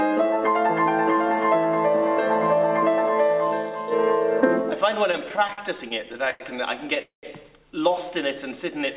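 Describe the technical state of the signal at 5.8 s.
At 5.8 s the signal sits inside a run of repeated stalls (stutter) lasting from 5.12 to 6.42 s. Packets kept arriving late, so the jitter buffer ran dry sixteen times, and each time the receiver stretched the last sound until data resumed, for about 0.3 s of fill in all, longest gap 98 ms. Unlike packet loss, nothing is dropped: the audio drags and hiccups rather than skipping ahead, all within the G.711 call path's 4 kHz band.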